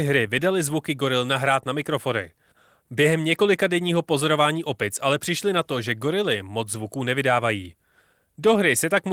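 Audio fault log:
Nothing stood out on listening to the speech.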